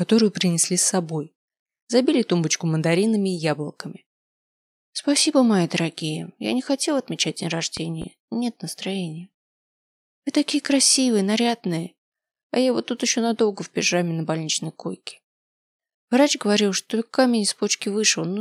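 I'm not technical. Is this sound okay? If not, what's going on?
No. At about 7.77 seconds there is a loud pop, actually two sharp pops close together, ending by about 8.05 seconds. They jump out above the rest of the sound, which carries on underneath without a break. A pop like this happens when a sudden jolt of electricity gets into the audio path. Here it was likely caused by a plug being moved, a switch being flicked, or a spark of static.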